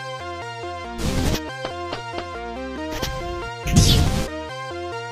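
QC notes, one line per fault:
0.20–4.05 s, clock drift buffer slips: a regular click or pop recurs every 1.28 s, about four times. The likely cause is two devices on separate clocks, roughly 0.1 percent apart, so the buffer periodically drops or repeats a block of some tens of samples.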